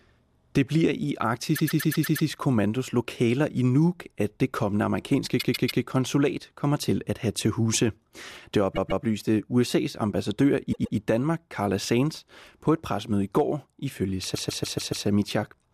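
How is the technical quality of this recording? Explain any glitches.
The recording has repeated frames at five points. A short block of the coded stream plays again and again, giving a mechanical stutter.

At 1.55–2.27 s, just after "bliver i", a 120 ms block repeats six extra times, adding 0.72 s. At 5.39–5.82 s, between "at det kommende amerikanske" and "konsulat kommer til at", a 144 ms block repeats three extra times. Further stutters occur at 8.75–9.04 s (144 ms, twice), at 10.72–10.96 s after "ambassadør i" (120 ms, twice), and at 14.34–15.06 s (144 ms, five times). The block lengths fit runs of five or six compressed frames being sent more than once. Each repeat lengthens the audio by the duplicated time.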